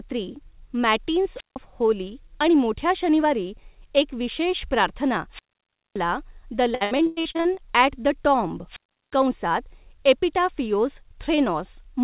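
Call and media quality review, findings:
Wireless microphone squelch dropout, 1.35–1.57 s, 5.30–6.01 s, 8.67–9.18 s: hiss swell, then near-silent holes of about 0.16, 0.58 and 0.36 s. Radio link fading until receiver squelch mutes. Landmarks: before "होली आणि मोठ्या शनिवारी", after "शनिवारी एक विशेष प्रार्थना", after "द टॉम्ब".

Repeated packet loss (robotic sound), 6.75–7.59 s: choppy audio with pieces missing. Nine gaps, longest 100 ms; about half the span is patched by stretching the last audio. Jitter buffer concealment under sustained loss. Audible band stops at 4 kHz, consistent with G.711 mu-law on the call path.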